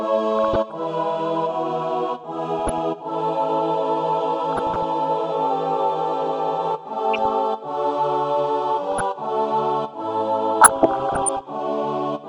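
Burbling bursts break over the audio in six short patches, at 0.39–0.71 s, 2.59–2.78 s, 4.52–4.83 s, 7.13–7.30 s, 8.92–9.01 s and, longest and worst, 10.61–11.42 s. This is DAB burbling. Weak reception lets a small fraction of a percent of bit errors slip past error correction into the MP2 data, so corrupted samples put short blips of noise in single sub-bands and corrupted scale factors make individual sub-bands jump in level for up to a frame.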